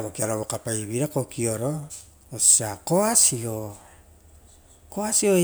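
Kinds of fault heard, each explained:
No technical faults heard.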